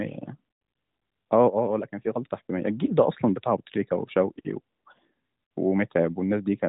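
No technical faults are audible.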